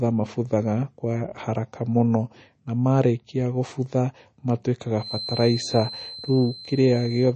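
Throughout, the speech sounds watery and swirly, with metallic chirps on s sounds, smeared attacks and no treble above about 8.3 kHz. This points to heavy MP3 compression, likely at a low bitrate around 32 kbps, where weak frequency lines flicker between frames.

From 4.95 s to the end, a thin, steady whistle at 4.1 kHz sits well below the speech, swelling and fading slowly in level. This is likely a feedback whistle: the loudspeaker-to-microphone loop hovers at the edge of feedback, sustaining one tone without running away.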